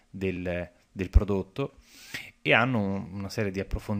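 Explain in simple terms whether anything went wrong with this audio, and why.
A block of digital silence at 0.36 s: for about a millisecond the sound drops to nothing, likely because the program filled its output late, leaving a tiny click.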